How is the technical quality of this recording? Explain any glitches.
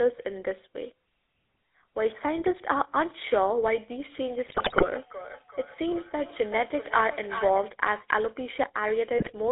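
The quality is poor: plainly audible mobile-phone coding throughout, plus an echo and two bursts of corruption.

The whole recording carries GSM full-rate codec damage, consistent with a 13 kbps stream. Its pulse-excited vocal-tract model makes the speech buzzy and gravelly, and a spectrogram shows energy confined to roughly 300 Hz to 3.7 kHz.

From 4.28 to 7.73 s there is feedback echo between two devices. A second device on the same call replays the audio into the first microphone. Each phrase returns roughly every 0.4 s, thinner and ringing, peaking about 12 dB below the speech. A spectrogram shows faint, evenly spaced copies of each syllable.

GSM bit errors strike at 4.46–4.88 s and 9.18–9.32 s. Corrupted filter, pitch and gain values produce squawks, pops and gargling. On a waveform these appear as sudden level spikes, and on a spectrogram as smeared, misplaced frames.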